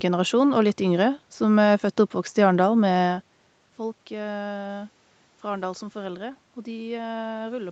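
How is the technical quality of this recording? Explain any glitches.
No glitches or faults can be heard in this recording.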